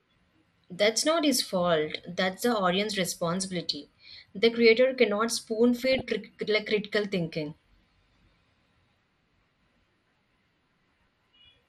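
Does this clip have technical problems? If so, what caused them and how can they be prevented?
Yes. The speech sounds dull throughout, with a gurgling, granular edge. The likely cause is MP2 compression starved of bits, which fits a rate around 80 kbps. Upper sub-bands drop out, and the rest are coarsely quantised. Encoding at a higher bitrate prevents this.

DAB burbling runs from 5.77 to 6.11 s, just after "creator cannot spoon" and before "like critical thinking". Burbling sits over the speech across 17 frames. A small share of bit errors got past error correction, so wrong samples put short blips of noise into single sub-bands. A better antenna or a stronger signal prevents it.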